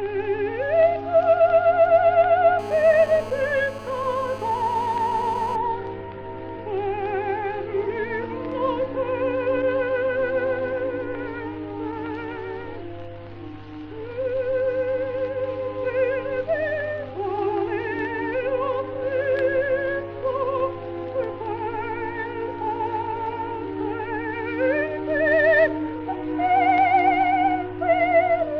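From 2.59 to 5.56 s there's GSM phone buzz: a steady, raspy 217 Hz rasp about 15 dB below the audio, from a nearby phone mid-call whose transmit bursts got rectified.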